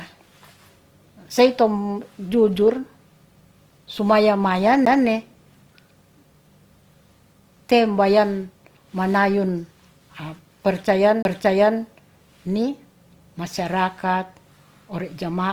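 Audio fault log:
throughout: Opus compression. Likely Opus music-mode coding near 24 kbps fills starved bands with folded energy and noise, so the speech sounds grainy and rough.
4.85 s and 11.22–11.25 s: CD skip. The laser jumped to another turn of the spiral, muting for about 10 ms and then about 30 ms. Each skip is heard as a tick or short gap and an abrupt jump in the speech.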